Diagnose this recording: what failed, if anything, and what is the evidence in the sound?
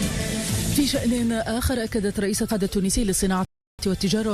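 At 3.45 s the sound stops dead and the clip falls silent until 3.79 s, then picks up at exactly the point where it broke off, with nothing skipped or repeated. That gap of about 0.34 s is a rebuffering stall at the playback stage: the player exhausted its store of downloaded audio and halted output until more data arrived. No content is lost; the stall simply inserts dead time into the timeline.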